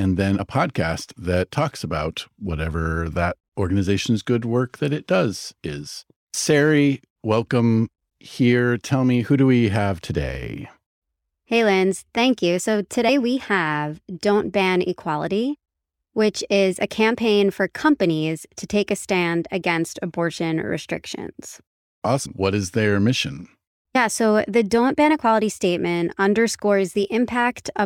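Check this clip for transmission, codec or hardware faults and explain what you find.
The speech has compressed frames skipped at four points: 0.38, 13.08, 22.25 and 23.94 s. Whole coded frames never reach the output. The audio jumps ahead roughly 50 to 70 ms, fitting two or three frames of about 26 ms. Overlapping frames smear each join into a brief blip, not a click.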